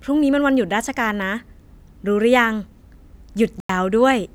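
A speech recording with one corrupt frame muted. At 3.60 s the audio cuts abruptly to silence for about 94 ms, resuming at 3.70 s. The decoder likely rejected a damaged compressed frame, and the player filled its slot with silence. The gap's length fits a single lost frame. Timing stays intact around it.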